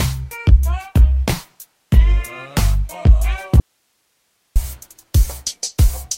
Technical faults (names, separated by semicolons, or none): audio dropout to a faint residue